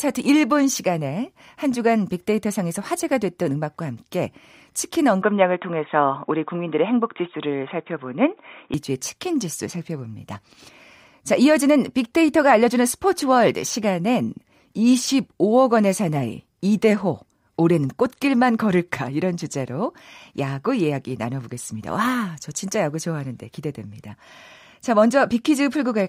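An input switch to a poorer device, from 5.22 s to 8.74 s, is the likely cause of the sudden change in this speech recording. With no gap at the change, the sound turns dull and narrow, with nothing above 3.8 kHz, as a lower-grade microphone or a headset's call profile would pass. The level shifts by roughly 5 dB, and a new background noise sits about 50 dB below the signal until the fuller sound returns at 8.74 s.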